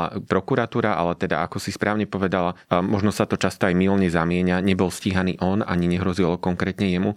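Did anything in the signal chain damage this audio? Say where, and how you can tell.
Yes. Sharp single clicks at 5.53 s and 6.61 s are dropped samples, likely lost in the driver or buffer. A few samples vanish, so the waveform jumps.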